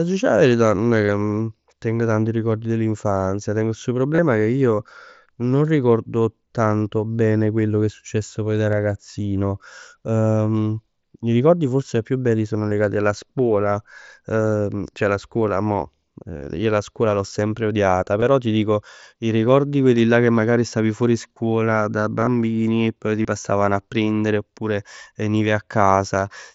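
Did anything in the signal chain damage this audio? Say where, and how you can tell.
Yes. Concealed Bluetooth headset packet loss occurs at 1.06 s (after "'a verità nun è"), 4.15 s, 8.72 s (after "è successo poi da"), 12.70 s, 16.37–16.41 s, 18.20–18.22 s, 22.20–22.27 s and 23.22–23.25 s (between "e poi ti" and "passavano a prendere oppure"). This is a radio-link fault between headset and phone. Gaps of 7.5 to 45 ms, which fit runs of 7.5 ms mSBC frames, are filled by repeating recent waveform. The longer fills sound buzzy and steady, with a slight warble where the real sound resumes. At 22.2 s the losses are spread across about 75 ms.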